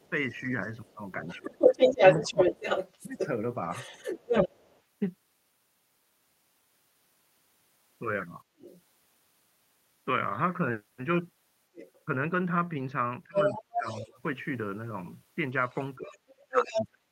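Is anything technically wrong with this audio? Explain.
Yes, there are three kinds of trouble here, and they all trace back to the echo canceller on a speakerphone-style setup.

Other side's voice leaking through shows up four times: 0.0 to 4.82 s, 8.58 to 8.82 s, 11.75 to 14.2 s, and 15.75 to 16.85 s. A second voice is riding along with the talker. At the start it's actually a bit louder than them, around 5 dB up. At 8.58 s it's just a faint scrap well underneath, roughly 20 dB down. In the last two stretches it sits about level with the talker. The likely cause is the far end playing out of a loudspeaker and the canceller not fully scrubbing it from the mic.

Speech suppressed in double talk lands at 0.1 to 4.53 s, 13.25 to 14.18 s, and 15.95 s through the end. Wherever that second voice overlaps the talker, the talker's level sags or drops out in pieces. Early on it's mild, maybe half a second of dips around 15 dB in total. 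Around 13.25 s it gets worse, roughly 700 ms of losses down to about 30 dB. In the final stretch it dips to about 35 dB. That's likely the canceller failing to tell near speech from echo and clamping down on both.

Background gated by the echo canceller hits at 8.44 to 8.58 s, just before that brief leak. The room tone ducks by about 16 dB for around 150 ms, then comes back. The canceller slammed the mic down hard while the loudspeaker was active and let go a moment later, so you hear the ambience briefly hollow out.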